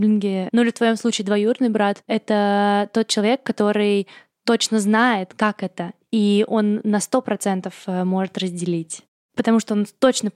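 Listening to this speech recording, nothing technically wrong stood out.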